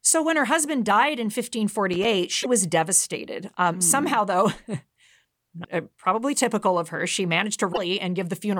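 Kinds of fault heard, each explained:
loose connector crackle: A worn or dirty contact in the signal path opening and closing as it shifts, so the audio is chopped into ragged fragments and any DC on the line adds pops. Here it is a single irregular scratchy burst from 1.93 to 2.05 s, about a tenth of a second long.
damaged data in a compressed stream: Corrupted bytes in the encoded stream leave the decoder misreading frames, losing sync and hunting for the next valid header, so a short burst of garbage replaces the audio. It appears three times as brief glitches: 2.39 to 2.46 s just before "was devastated", 5.61 to 5.66 s before "uh probably typical of", and 7.72 to 7.78 s after "typical of her she".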